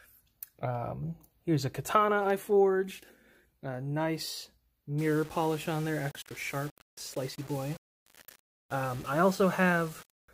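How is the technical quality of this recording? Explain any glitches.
From about 4.98 s to 10.28 s there's low bit depth without dither. The sound turns grainy and gritty, with distortion that shifts as the sound changes, sitting roughly 25 dB below the signal. It's likely the audio was rounded to about 6 bits with no dither, so the error tracks the signal.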